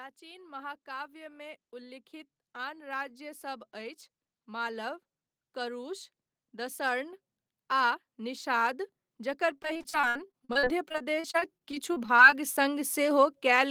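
From 0.19 s to about 12.98 s, automatic gain rising sets in: the gain control judged the input too quiet and kept pushing its level up, about 22 dB over the whole stretch. Because the boost is applied to everything, the background noise floor swells right along with the speech. That shared rise, slow and steady over more than twelve seconds, separates it from a speaker simply talking louder, where the background would stay put.

Between 9.53 s and 12.41 s, repeated packet loss (robotic sound) breaks up the speech. Dozens of short holes, the longest about 61 ms, fall one after another. Some are papered over by stretching the last bit of sound, about 670 ms of patching in total, and roughly 580 ms simply drops out. About a quarter of that span is concealed. The result is choppy, with pieces missing. Unlike a single dropout, the damage keeps recurring in quick succession.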